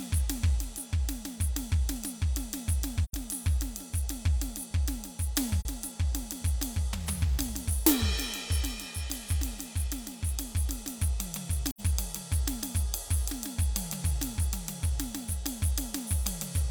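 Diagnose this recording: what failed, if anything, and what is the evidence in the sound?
The codec stage failed: the music shows AAC frame loss with muting, where the decoder received nothing for some frames and substituted silence. Holes occur at 3.04–3.14 s, 5.60–5.65 s and 11.68–11.81 s. The overlapping transform windows still blend in the neighbouring frames, so the music fades down and back up instead of cutting off, leaving soft-edged dropouts. Gaps of about 43 ms and 85 ms fit one and two lost frames.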